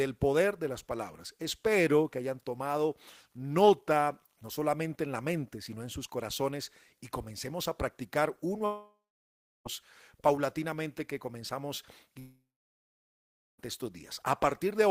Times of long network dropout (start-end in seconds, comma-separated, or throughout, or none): 8.65-9.67, 12.19-13.60